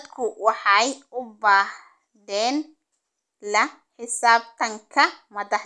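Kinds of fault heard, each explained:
No technical faults can be heard anywhere in this speech.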